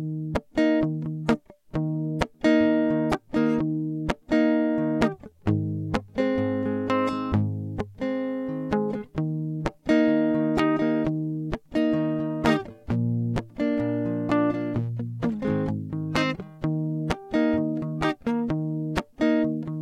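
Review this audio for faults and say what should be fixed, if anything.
Nothing to fix; I found no faults in the music.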